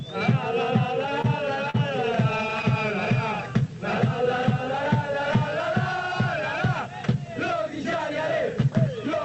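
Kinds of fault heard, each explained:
Short stall from a late packet: a packet missed its playout time, the jitter buffer ran dry, and the receiver held the preceding sound until the data arrived, then resumed from the same point, so nothing is lost but playback slips later. It occurs twice, at 1.21–1.26 s with 26 ms stretched and at 1.70–1.76 s with 41 ms stretched. Each is heard as a briefly frozen sustain over the call codec's 8 kHz band limit.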